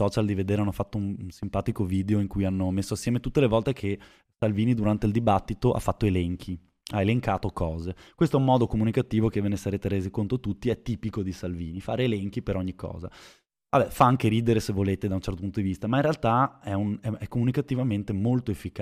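A speech recording, and nothing is technically wrong with it.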